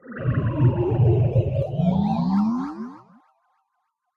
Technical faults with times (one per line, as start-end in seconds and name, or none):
0.00-4.16 noise suppressor applied to music or sounds
0.00-0.16 sound cut by the noise suppressor
2.89-3.33 sound cut by the noise suppressor